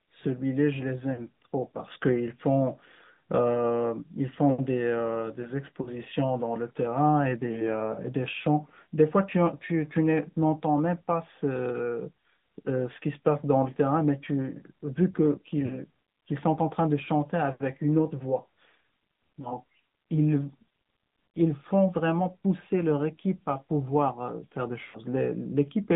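Throughout, the speech passes through an AMR narrowband mobile codec at a rate that sounds like about 10.2 kbps, confining it to roughly 150 Hz to 3.7 kHz, with plainly audible buzzy, synthetic coding damage. Lost AMR speech frames occur at 1.14 to 1.28 s, 5.82 to 5.93 s, 15.66 to 15.77 s, 19.42 to 19.52 s and 24.86 to 24.99 s. Each time the decoder bridges missing data by repeating the last good pitch and vocal-tract settings at falling gain. The gaps are 40 ms, which fits two frames, in the first three places, 20 ms at 19.42 s, and 80 ms at 24.86 s, where the smeared sound fades furthest before recovering.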